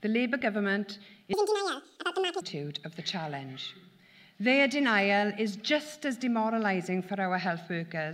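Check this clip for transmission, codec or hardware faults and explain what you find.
There is one fault: from 1.33 s to 2.41 s the audio is read two samples at a time, so that stretch plays at double speed. The reader treats each pair of samples as a single frame, as if the stream had two channels or wider samples, and steps through the data at 2.0 times the proper rate. The sound in that window is rushed and pitched up an octave.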